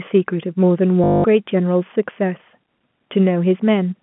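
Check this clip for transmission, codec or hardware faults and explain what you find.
One fault stands out, heard over a G.711 telephone-band line limited to about 150 Hz to 3.4 kHz. From 1.04 to 1.24 s there is packet loss with the last packet repeated: 200 ms of audio went missing, and the receiver kept replaying its final packet. The repeats fall out of step with the pitch, so the run buzzes, fitting 20 ms packets at 50 Hz. It sounds like a brief robotic stutter. A waveform shows identical repeating blocks, and a spectrogram shows frozen, evenly striped columns.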